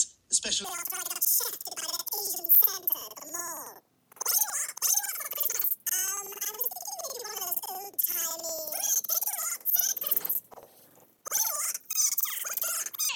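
From 0.65 s to the end, planar audio is being read as interleaved. Each block of about 93 ms, which fits a 4096-sample block, plays its left half and then its right half at double speed, so the sound sits an octave high with a flutter at 10.8 Hz.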